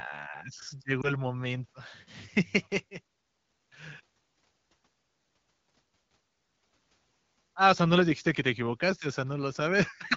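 A speech frame was lost over the radio link. It failed its checksum, so the AMR wideband decoder had to conceal the gap by reusing the last good pitch and vocal tract settings at reduced gain. Between 1.02 and 1.12 s this single lost frame, about 20 ms of audio, is heard as a brief dip or warble in the speech before normal decoding resumes. The clear HD Voice coding around it fits a rate of about 12.65 kbit/s.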